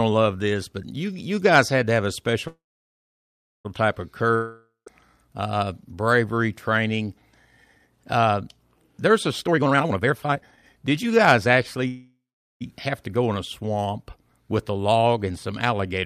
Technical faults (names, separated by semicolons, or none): call audio freeze; long network dropout; jitter buffer speed-up